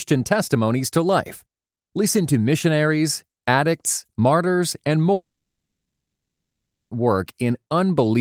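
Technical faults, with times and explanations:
5.13 to 6.93 s, long network dropout: The speech cuts out for about 1.8 s. For roughly the first tenth of a second, the last sound carries on as a fading buzz. Then about 1.7 s of silence follows. The speech resumes at 6.93 s, and nothing from the gap returns. The likely cause is a stretch of lost packets. The receiver stretched what it last had, gave up, and then skipped ahead.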